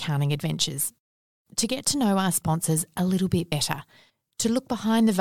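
At 3.51 s, just after "sponsors a little bit", damaged data in the compressed stream makes the decoder lose frame sync, producing a brief glitch.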